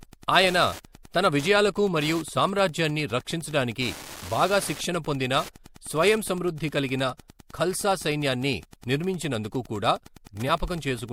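Wi-Fi interference runs through the whole speech clip. The audio circuit rectifies a nearby radio's beacon, sent every 102.4 ms, producing a steady tick nearly ten times a second, about 20 dB below the speech. Unlike the rapid buzz of GSM pickup, it is distinctly separate ticks.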